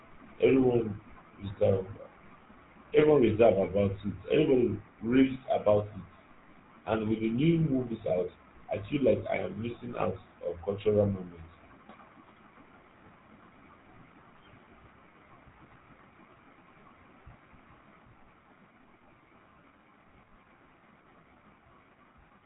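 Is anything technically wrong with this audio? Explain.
Yes. Throughout the speech, the audio has been through a GSM full-rate codec, the old 13 kbps mobile-phone coder. It models the vocal tract with a short filter and excites it with a regular pulse train that keeps only one excitation sample in three, then discards everything above about 3.9 kHz. That coarse excitation gives the voice a plainly audible buzzy, gravelly roughness, and the missing top band makes it sound dull and phone-like.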